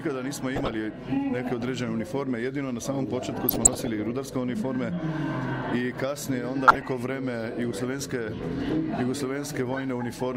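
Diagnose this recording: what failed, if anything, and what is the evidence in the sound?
DAB burbling in the codec and reception stage at 0.55–0.76, 3.49–3.87 and 6.68–6.82 s. Uncorrected bit errors corrupt MP2 sub-band samples and scale factors, causing short noise blips and level jumps in single sub-bands rather than the silent gaps of dropouts.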